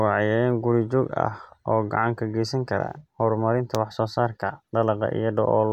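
Nothing in this bit of speech jumps out as a technical problem, so there's really nothing to flag here.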